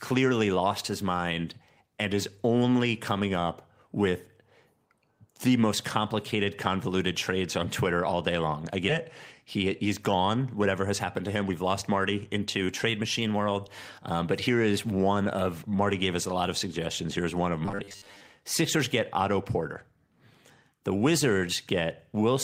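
A skip ahead occurs at 8.89 to 8.91 s, right after "all day long I": roughly 0.4 s of speech was dropped while later audio was already queued, and playback jumps straight across the gap with no fill, joining the two sides almost directly.

A jitter buffer speed-up runs from 10.81 to 13.34 s, following "he's gone". The receiver held excess audio and trimmed short pitch-period pieces repeatedly, removing around 0.2 s in total, so the speech plays about 8% faster at unchanged pitch and sounds hurried.

Robotic sound from repeated short buffers appears from 17.66 to 18.22 s, after "one of". The speech becomes a rigid, metallic buzz at 100 Hz that still loosely tracks the syllables, with around half the material being repeats. The likely cause is audio arriving too seldom, so a 10 ms piece was looped to fill the time while real audio was skipped.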